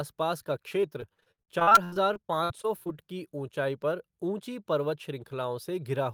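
From 0.81 s to 2.94 s the speech suffers repeated packet loss, giving a robotic sound. Around twenty short dropouts follow one another, each filled by stretching the last received audio, so about 28 percent of that span is synthetic continuation rather than real signal. The longest hole is 74 ms. The result is choppy, robotic speech with fragments missing, clearing just before "की ऊँचाई पर ऊँची".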